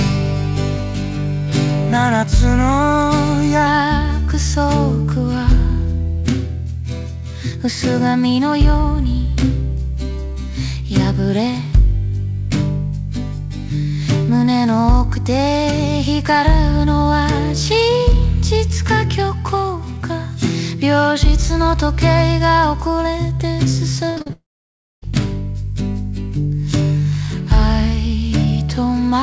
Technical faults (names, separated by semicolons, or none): repeated packet loss (robotic sound); long network dropout